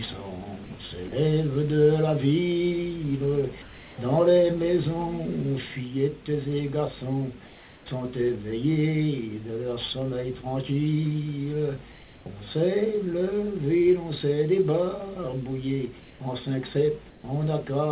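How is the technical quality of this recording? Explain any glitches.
The recording has two kinds of short fault, all heard through a narrow band with nothing above 4 kHz, which fits a 64 kbps telephone codec such as G.711.

Sound dropped by the voice detector, at 0.64–0.70 s and 1.08–1.12 s: brief sound gives way to steady hiss, likely because the detector misjudged it as background. On a spectrogram, the detail breaks into flat noise.

Comfort noise in place of the background, at 3.62–3.98 s, 7.46–7.86 s, 16.0–16.2 s and 17.1–17.24 s: the textured background becomes smooth synthetic noise about 1 to 3 dB quieter. The waveform dips slightly and the spectrogram shows a uniform smear.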